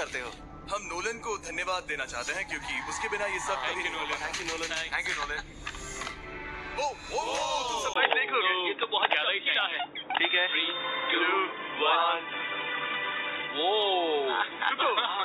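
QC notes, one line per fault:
7.94–15.24 s, input switched to a poorer device: after a 20 ms gap the audio turns dull and boxy, with nothing above 3.8 kHz, a small level shift and a faint new noise floor. The likely cause is a change of microphone, since a simple filter would not add new noise or a level change.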